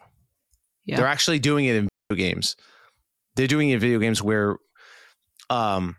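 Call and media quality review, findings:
Digital wireless dropout at 1.89–2.11 s, just after "actually doing it in". Speech cuts to near silence for 0.22 s. Clean hole, no noise burst either side. Probable component: wireless receiver. Link lost too much data; receiver muted with a very short fade.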